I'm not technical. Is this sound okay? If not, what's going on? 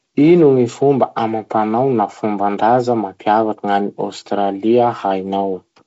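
Yes, no faults here.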